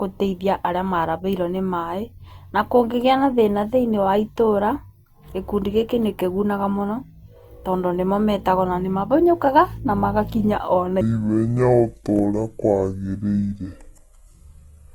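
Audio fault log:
11.01–14.95 s, section at the wrong speed: from 11.01 s to the end, the speech runs at 0.592 times its recorded speed and sits about ten semitones lower, so it sounds deep, slow and drawn out. Pitch and tempo drop together at the transition, not pitch alone. This is likely caused by the section being played back or resampled against the wrong clock, so its samples are read out more slowly than they were captured.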